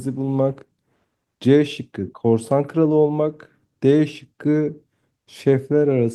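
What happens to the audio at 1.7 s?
Nothing goes wrong at 1.7 s; the speech carries straight through that point with no dropout, click or distortion.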